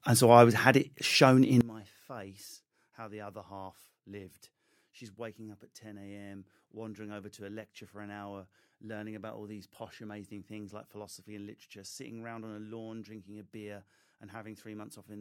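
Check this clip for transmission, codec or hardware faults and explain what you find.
Found one fault. From 1.61 s, right after "had it shown in", to the end, the sound drops about 21 dB to a faint residue: likely one channel inverted, cancelling the shared centre in mono.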